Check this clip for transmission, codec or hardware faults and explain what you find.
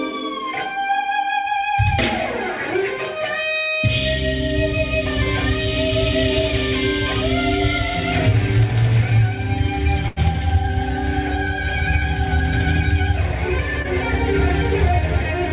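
Two transmission faults are audible, both packet losses, heard through a call path that stops at 4 kHz, which fits G.711 A-law narrowband coding.

From 10.08 to 10.18 s there is a burst of packet loss. About 80 ms of audio never arrived, so the receiver extended the last sound and faded it. This produces a held, decaying buzz or hiss with steady, smeared bands on a spectrogram before the audio jumps ahead.

From 13.82 to 13.86 s there is a short concealed packet loss. About 20 ms went missing and was synthesised from the preceding sound, then cross-faded back. It is a brief smear or wobble, visible as a tiny blurred patch.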